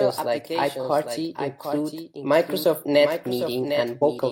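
A doubled audio track runs throughout: a second, full-band copy of the speech trails the original by roughly 0.7 s, around 10 dB quieter, with no room decay. The likely cause is a slower second capture path mixed back in, giving a flat, detached echo.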